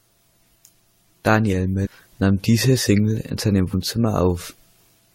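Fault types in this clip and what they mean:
Damaged data in a compressed stream: corrupted bytes make the decoder misread frames and lose sync, producing short blips at 1.85–1.87 s, just before "nahm diese", and at 3.73 s, right after "in seinem", each while the decoder hunts for the next valid frame header.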